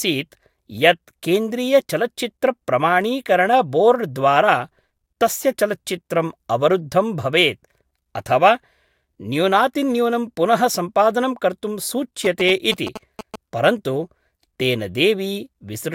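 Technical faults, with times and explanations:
12.25 to 13.36 s, GSM signalling bursts: just after "न्यूनातिन्यूनं पुनः सम्पादनं कर्तुं", a galloping dit-dit-dit of short buzzes at about 217 Hz sits roughly 10 dB under the speech. A nearby 2G phone is signalling, and the audio circuitry rectifies its radio bursts into audible buzzing.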